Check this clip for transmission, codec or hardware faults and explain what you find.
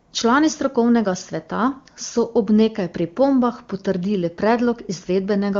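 I find no transmission, codec or hardware faults in this clip.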